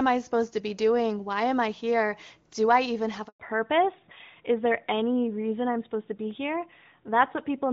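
At 3.28 s the speech cuts out for 120 ms, until 3.40 s, in a handover gap. The call switched networks and no speech frames arrived. Unlike a lost packet, which is briefly concealed or smeared, this is a clean, dead silence with nothing filling it.

From 3.40 s to the end comes a fallback to narrowband. The HD Voice link, AMR-WB at 23.85 kbit/s and clear until then, gives way to AMR-NB at 12.2 kbit/s. Everything above 4 kHz disappears, so the speech turns dull and rougher. A low-rate wideband mode keeps its top band, but this loss is a sudden, permanent ceiling.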